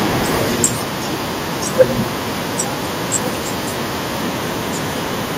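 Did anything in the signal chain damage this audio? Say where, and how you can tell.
Yes. Microphone overload, at the converter stage, hits at 0.64 to 0.66 s and again at 1.8 to 1.83 s. The first burst drives roughly 15 dB past full scale, the second about 4 dB, with around a fifth of the samples in each stretch flattened at the ceiling. That gives a harsh, crackly edge on the loudest peaks, likely from input gain set too high. Codec distortion would smear across quieter passages, but this appears only on peaks.

A microphone volume step-down follows at 0.65 s, in the call-processing stage. The whole signal, background included, drops by about 2 dB at once and stays there, likely because the call software reacted to the overload by lowering the device's input gain. A single fixed step right after a clipped peak is what separates this from a compressor or automatic gain control, which would pump and recover over time. 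The 1.8 s overload shows no second drop.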